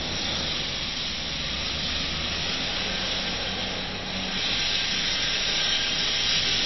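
From start to finish the audio carries MP3 compression damage, and it is plainly audible. Nothing survives above about 5.8 kHz, so the top end is cut flat, and the remaining detail has a watery, swirling quality where weak frequency components drop in and out between frames. Attacks sound smeared. The most likely cause is a starved encoder, with the damage consistent with a bitrate around 24 kbps that forced the treble cut and the zeroing of quiet components.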